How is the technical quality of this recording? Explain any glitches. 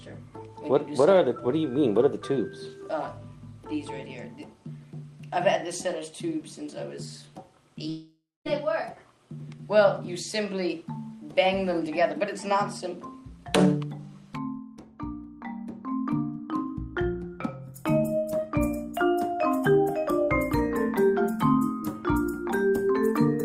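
There's one real glitch. From 7.89 to 8.47 s there's a long network dropout, likely from lost packets: the last sound smears into a fading buzz, then about 0.2 s of silence, and the audio resumes with that stretch gone.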